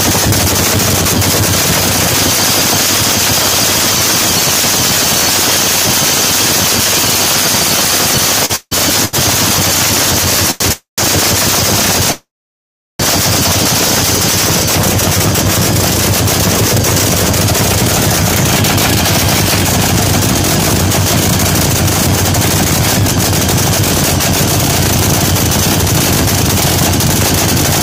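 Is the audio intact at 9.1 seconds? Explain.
No. From 9.05 to 9.15 s a sound is held about 76 ms too long, with a slight buzz or dip. This is a short stall from a late packet: the jitter buffer ran empty, so the last sound was stretched until the packet arrived, and nothing was lost.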